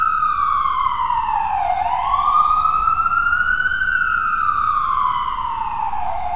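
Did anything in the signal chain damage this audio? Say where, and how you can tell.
No, nothing in the signal chain damaged this audio. Every stage from capture through to playback passes the sound without any audible trace of harm.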